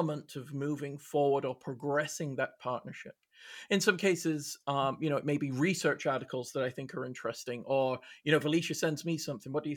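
Nothing stood out on listening to this speech recording.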